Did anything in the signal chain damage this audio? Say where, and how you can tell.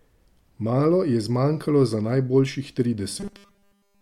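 Yes. The damage sits at the driver or buffer stage. From 3.20 s, right after "je zmanjkalo za najboljših", to the end at 4.01 s, the speech becomes robotic sound from repeated short buffers. Essentially the whole stretch is replaced by one short chunk replayed over and over, which imposes a rigid 200 Hz metallic buzz that only loosely tracks the speech. A 200 Hz repeat rate fits a 5 ms buffer, likely looped because fresh audio stopped arriving in time.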